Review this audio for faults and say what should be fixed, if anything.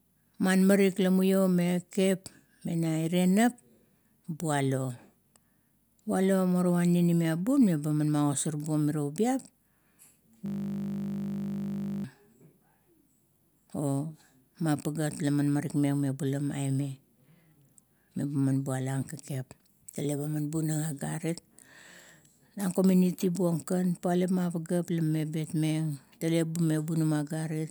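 From 10.46 s to 12.04 s the speech gives way to a steady 50 Hz buzz, a system hang loop. The host or driver stalled while the audio hardware kept replaying the same 20 ms stretch of its ring buffer, 79 identical passes in a row, so the repetition rate itself becomes the tone. Unlike mains hum, it replaces the speech rather than sitting under it, starts and stops abruptly, and has the exact timbre of the frozen slice. To prevent it, give the audio thread real-time priority and have the driver mute output when buffer refills stop arriving.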